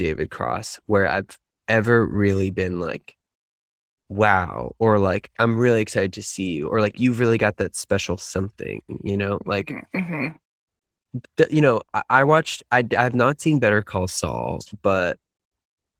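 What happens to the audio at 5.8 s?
Nothing goes wrong at 5.8 s: the speech continues intact through that moment, carried by the ordinary Opus voice compression with nothing added on top of it.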